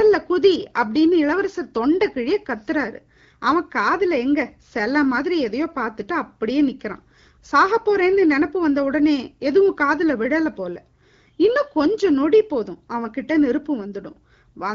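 No faults occur anywhere in this recording.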